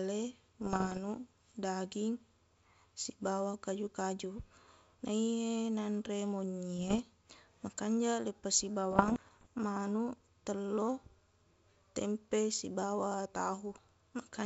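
Bit errors on an ADPCM link corrupt the G.722 bitstream three times, at a rate of about 0.7 percent. Each flipped bit also throws off the decoder's step size and predictor, so the damage rings on briefly instead of staying a single click. The result is pops and rough, gritty bursts with short jumps in level from 0.61 to 0.99 s, from 6.77 to 7.00 s right after "naiye nanre monyi", and from 8.91 to 9.47 s just before "manuq telloq".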